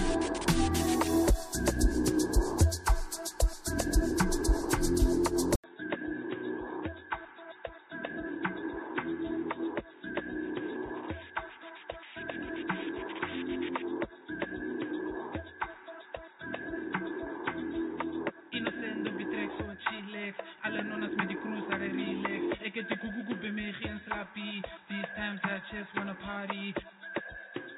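Input switched to a poorer device at 5.56 s: after an 80 ms silence, the audio likely comes from a narrower-band microphone or headset profile to the end, about 10 dB quieter, dull and boxy with nothing above 3.8 kHz, over a faint new noise floor.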